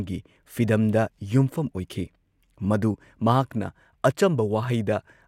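Nothing in this recording stands out as a technical fault, so there's no glitch or problem along the way to point to.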